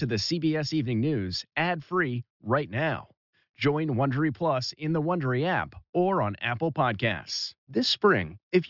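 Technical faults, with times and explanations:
No technical faults can be heard in this speech recording.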